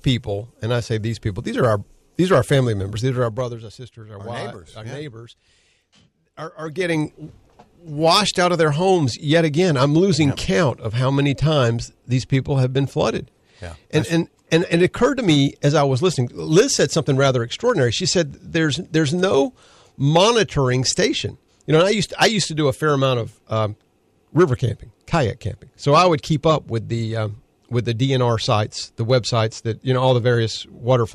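A fine ticking, zipping texture rides on the speech from 3.16 to 3.67 s as the level drops by roughly 15 dB, and again from 6.60 to 6.97 s as it rises back. This zipper noise comes from unsmoothed 1 dB gain steps, around forty a second.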